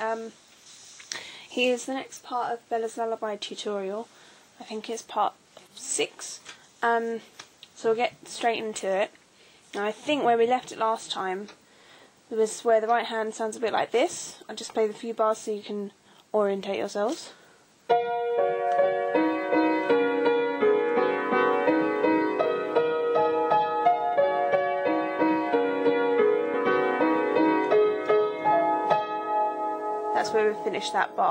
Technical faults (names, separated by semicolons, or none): damaged data in a compressed stream